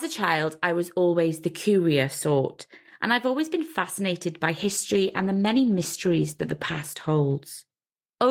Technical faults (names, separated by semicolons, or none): call bitrate drop